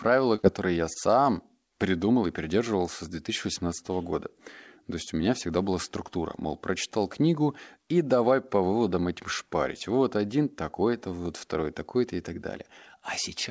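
Short concealed packet loss hits the speech at 0.36–0.40 s, 0.42–0.45 s and 0.93–0.97 s, about 20 ms missing each time, which the receiver papered over by extending the preceding sound. Each is heard as a tiny smear or wobble. On a spectrogram, which is empty above 8 kHz throughout, harmonics briefly freeze or blur.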